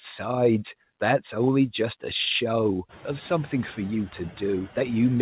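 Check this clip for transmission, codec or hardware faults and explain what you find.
One fault runs through the whole clip: noise suppressor artifacts. The background noise dips between phrases and swells back under the speech. This is most obvious once the room noise climbs by about 24 dB around 3 s. A frame-by-frame suppressor is cutting the bands it judges to be steady noise by about 12 dB, so its gain follows the speech. The audio also stops at 4 kHz, which fits a narrowband telephone codec.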